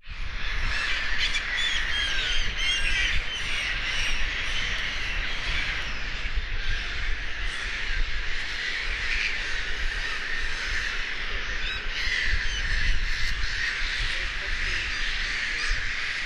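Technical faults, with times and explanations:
2.08 s, underrun with held sample: the output ran dry for 1.45 ms, which fits a 64-sample gap. The waveform freezes flat, then audio resumes with a little missing.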